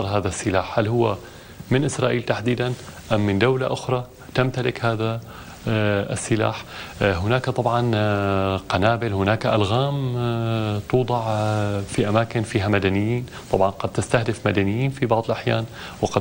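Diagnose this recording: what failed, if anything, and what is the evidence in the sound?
Nothing in the recording points to a failure at any stage of the chain. There is no audible event that would need a mechanism to explain it.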